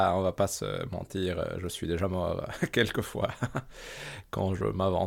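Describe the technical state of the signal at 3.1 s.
At 3.1 s the converter clock is unstable, the sample clock jitter running from 0.32 to 4.01 s, just after "on va". Timing errors of a couple of microseconds add a hiss-like roughness around 35 dB below the speech, strongest on loud, bright sounds.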